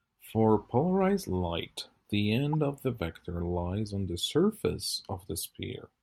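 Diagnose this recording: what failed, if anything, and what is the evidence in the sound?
The codec stage is where this one broke. At 2.53 s there's a short chirp or burst lasting to about 2.59 s, roughly 60 ms, which fits a corrupt frame decoded: a few compressed frames took bit damage and the decoder played them anyway. The misread gains and codes push energy into frequencies that don't belong in the speech, peaking somewhere around -25 dBFS.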